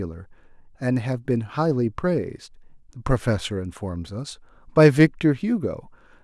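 No technical faults can be heard anywhere in the speech.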